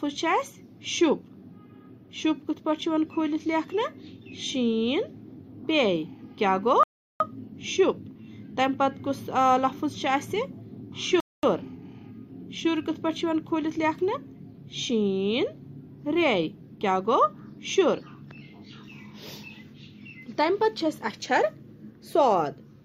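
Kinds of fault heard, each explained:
Rebuffering stall: the player ran through its downloaded audio and paused until more arrived, then carried on from the exact point where it stopped. Gaps at 6.83 s (0.37 s) and 11.20 s (0.23 s) show as a flat-line waveform and blank spectrogram columns.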